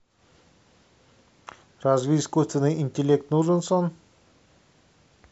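Listening to the speech recording, nothing stood out as a technical problem at any point.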